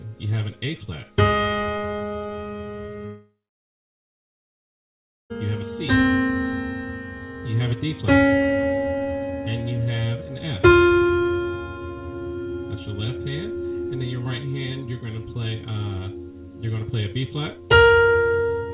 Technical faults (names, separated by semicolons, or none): long network dropout